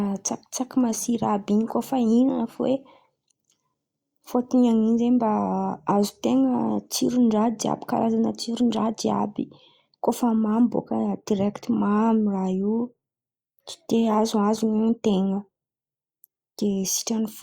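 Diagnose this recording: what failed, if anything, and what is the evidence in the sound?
Nothing in the chain failed here: the speech signal stays continuous and stable in level and timing throughout, with no audible trace of trouble at any stage from capture to playback.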